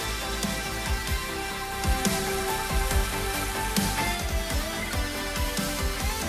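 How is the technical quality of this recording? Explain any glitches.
The recording has one clear glitch: digital radio blending to analogue, from 1.63 s to 4.36 s. The receiver lost its digital stream and cross-faded over about 265 ms to the station's FM broadcast, then returned to digital at the end. During that stretch, hiss rises to roughly 35 dB below the signal, and the level shifts by about 4 dB.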